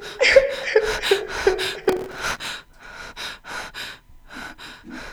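From 1.85 to 2.48 s there's a burst of processor overload crackle: the machine kept missing its deadlines on tiny buffers, around 3 ms each, roughly fifty misses in all. Each miss replays a scrap of old audio with hard edges, so you hear gritty tearing over the sound until the load eases.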